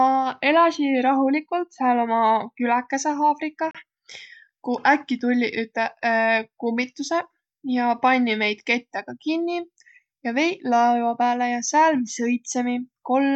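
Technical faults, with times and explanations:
3.71 to 3.75 s, Bluetooth stall: the speech drops out to dead silence for about 35 ms and then comes straight back. It's likely a wireless hiccup: interference held up packets long enough for the headphones' buffer to run empty, so playback simply paused until the resent audio arrived. That's why it sounds like a clean, brief hole rather than distortion.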